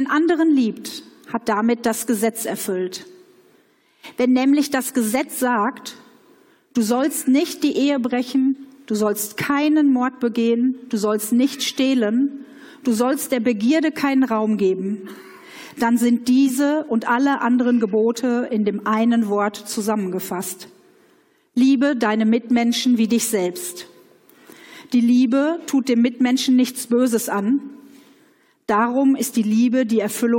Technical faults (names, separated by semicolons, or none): none